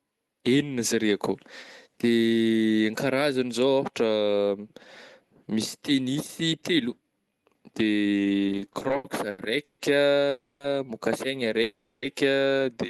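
From 8.47 to 9.81 s, repeated stalls (stutter) make the speech drag. The jitter buffer keeps running dry, and about a third of the span, with gaps of up to 150 ms, is filled with stretched, smeared continuations that show on a spectrogram as smeared, frozen bands.

At 10.29 to 10.62 s and again at 11.62 to 12.04 s, a call audio freeze holds a fading buzz for 310 ms and then 400 ms. The likely cause is held-up packets. The waveform shows a decaying plateau before speech resumes.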